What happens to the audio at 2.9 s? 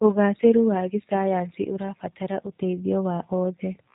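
The speech at this point, as across the whole clip, has passed through a G.729 codec, which fits an 8 kbit/s stream. It rebuilds the speech from a vocal tract filter, a pitch predictor and sparse pulses. Nothing above 3.8 kHz survives, leaving the voice muffled, rough and plainly synthetic.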